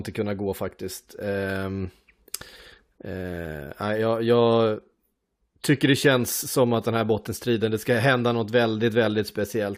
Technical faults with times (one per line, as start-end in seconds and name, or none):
0.71 overlap between stream segments